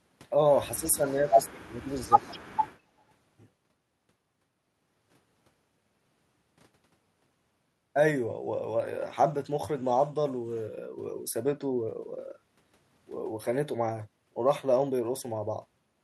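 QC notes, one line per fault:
0.75–2.23 s, speech suppressed in double talk: the speech dips in pieces across this span, about 1 s of it pulled down in total, at its deepest by roughly 25 dB, so syllables thin out or vanish. This is likely a canceller that heard two sides at once, could not tell the local talker from loudspeaker echo, and turned the whole microphone signal down to be safe.
1.07–1.37 s and 2.2–2.38 s, echo leak: a faint delayed copy of the speech, trailing it by 196 ms, is heard in two scraps. The first sits very low, about 40 dB under the speech; the second is more obvious, about 25 dB down. The likely cause is a loudspeaker on one side whose echo canceller left part of its microphone pickup unremoved and sent it back.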